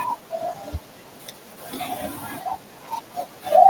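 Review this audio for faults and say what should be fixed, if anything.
Small, uneven hiccups run through the speech from start to finish: clock drift between sender and receiver, with the sender's clock running about 4 percent fast and steadily overfilling the jitter buffer.

From 0.21 to 3.36 s, slight skips and an unsteady tempo are repeated timing corrections. The receiver keeps trimming short pieces to keep pace with the sender, which is running at about 104 percent speed.

To prevent this, lock both ends to a common clock or add adaptive resampling at the receiver, so drift is absorbed smoothly rather than corrected by cutting audio.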